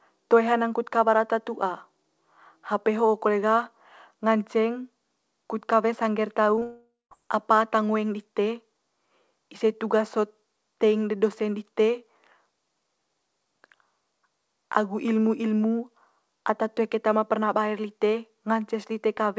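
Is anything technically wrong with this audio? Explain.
Yes. At 6.56 s and 6.59 s, short concealed packet loss: about 20 ms of audio arrived too late twice, and the receiver patched each gap with continued sound, heard as a quick smear. From 6.63 s to 7.13 s, a long network dropout likely cut off the stream for about half a second. Concealment carried the last sound on as a fading buzz or hiss, then roughly 0.2 s of near silence. The speech resumes after that, but the lost part is gone. Throughout, nothing above 8 kHz is present, which fits a G.722 call codec.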